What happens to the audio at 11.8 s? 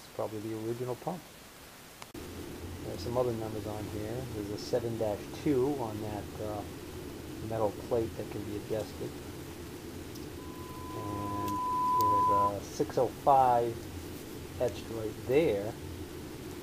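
At 11.8 s the audio is in the middle of a loudspeaker feedback squeal that runs from 10.38 s to 12.53 s. A microphone is picking up the loudspeaker it feeds, and at 1 kHz the loop gain has gone above one, so that frequency reinforces itself on every pass. The tone swells over roughly a second and a half into a steady squeal, sitting around 10 dB above the rest of the sound before it stops.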